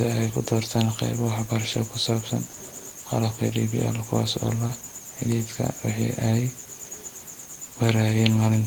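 In this speech clip, brief smears and wobbles appear just after "waxbarasho oo ku saabsan" at 2.47–2.55 s, at 3.47–3.51 s, after "kuwaas oo la" at 4.67–4.71 s, and at 7.73–7.77 s. This is short concealed packet loss: each time, about 20 ms of audio (40 ms at 2.47–2.55 s) arrived too late and was patched by extending the preceding sound before blending back.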